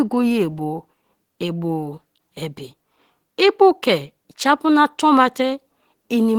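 Throughout the speech, plainly audible Opus compression, likely in its hybrid mode near 16 kbps, leaves the sound grainy and hoarse. The spectrogram shows noisy, smeared bands reaching 20.2 kHz.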